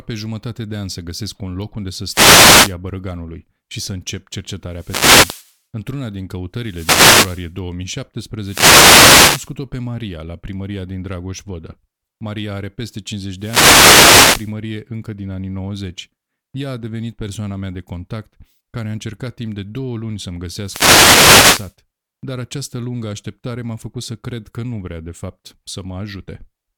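Speech with repeated wireless microphone noise hits at 2.08–2.76, 4.67–5.58, 6.59–7.53, 8.39–9.55, 13.36–14.54 and 20.62–21.76 s: bursts of static where the FM radio link fades. The noise swells and recedes rather than cutting out cleanly as a digital dropout would.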